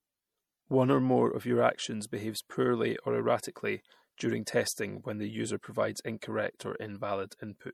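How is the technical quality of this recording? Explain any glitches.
The recording has one audible problem that runs the whole length. From start to finish the speech sounds watery and swirly. This is likely MP3 compression at a bitrate that fits roughly 64 kbps, where weak frequency lines drop in and out between frames.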